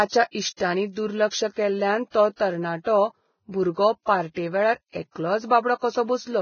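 Throughout this speech clip the high end is dull and grainy: nothing reaches above 6.6 kHz, and the treble that remains has a hissy, noise-like texture, with consonant onsets smeared and tonal parts roughened. This is likely heavy Vorbis compression at a very low setting, which fits a bitrate of around 17 kbps. The codec lowered its cut-off and quantised the upper residue so coarsely that fine detail became noise of similar energy.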